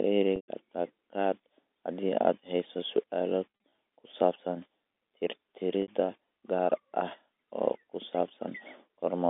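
Packet loss with pitch repetition at 0.36–0.48 s (120 ms gone), at 3.57–3.78 s between "haddii aad hayso su'aalo" and "ku saabsan" (scattered runs up to 40 ms), and at 5.82–5.88 s (60 ms). Each gap is bridged by looping the last pitch period, heard as a brief buzzy held tone in the shorter gaps and fading into silence in the 120 ms one, through the band-limited G.711 line.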